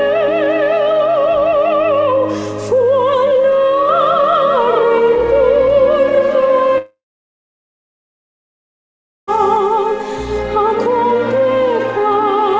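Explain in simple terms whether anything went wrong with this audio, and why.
A long network dropout runs from 6.78 s to 9.29 s. For about two and a half seconds, the audio most likely stopped arriving. The receiver briefly stretched the last bit of sound into a short fading buzz, then played silence for roughly 2.3 s. When the audio returns at 9.29 s, it picks up further along, and the missing stretch is gone for good. Throughout, the call codec keeps the sound dull, with nothing above 8 kHz.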